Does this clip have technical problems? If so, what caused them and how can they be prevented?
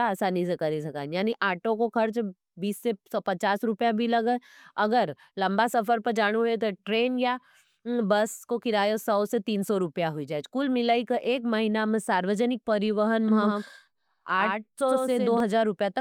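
Yes. The audio was likely picked up a second time through a slower path, or an edit left two copies overlapping out of step, producing a doubled audio track from 13.28 to 15.40 s. A second full-band copy of the speech trails the original by roughly a tenth of a second, at about 5 dB lower, with no decay or room colour. It cuts in and out abruptly at those times. To prevent this, route each source into the mix only once and check edit points for overlapping duplicate regions.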